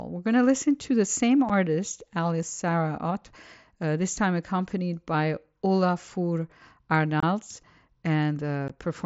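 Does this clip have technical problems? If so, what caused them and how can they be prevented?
Yes. Unconcealed Bluetooth headset packet loss causes abrupt gaps at 1.49 s after "listen to the same", 7.20–7.23 s, and 8.68 s. Dropped wideband mSBC packets were replaced by silence or an idle pattern rather than concealed. Keeping the headset close to the phone, away from Wi-Fi interference, and enabling packet loss concealment would prevent this.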